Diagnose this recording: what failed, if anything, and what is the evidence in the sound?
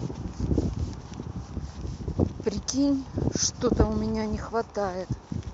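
Nothing failed: no stage in the chain shows a fault in the sound, so there is nothing to diagnose.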